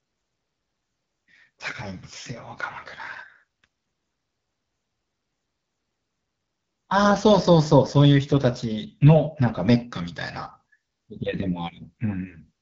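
AMR wideband (HD Voice) coding runs throughout the speech, with nothing above about 7.3 kHz. The vocal tract model is starved of bits, so the speech turns plainly rough and raspy, which fits the low 8.85 kbit/s mode. The top band is shaped noise.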